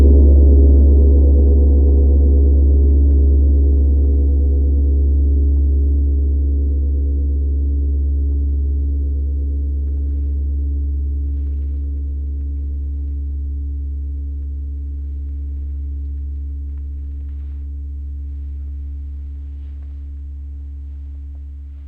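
Nothing to flag: no audible technical fault anywhere in this recording of everyday sound.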